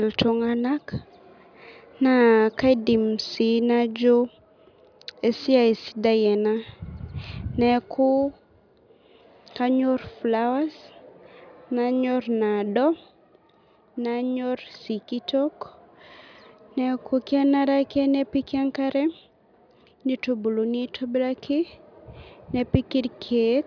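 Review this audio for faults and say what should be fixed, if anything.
Nothing stood out on listening, so there is nothing here that needs fixing.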